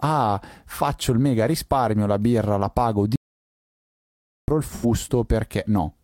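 Audio dropout to silence, from 3.16 to 4.48 s: right after "la birra la pago" the speech cuts off and about 1.3 s of dead silence follows, with no room tone, before the sound returns. The likely cause is a lost input feed while recording continued writing silence.

AAC frame loss with concealment, from 4.68 to 4.85 s: a brief smeared, noisy patch of about 85 ms, consistent with two missing AAC frames that the decoder filled in by reusing and scrambling the last good spectrum instead of true signal.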